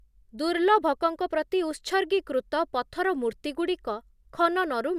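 No technical faults can be heard anywhere in the recording.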